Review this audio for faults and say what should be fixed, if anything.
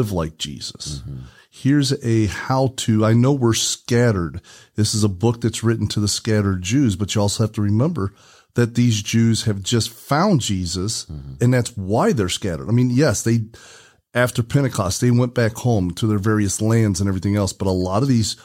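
Nothing here needs fixing; I didn't hear any problems anywhere in the recording, so it can stay as it is.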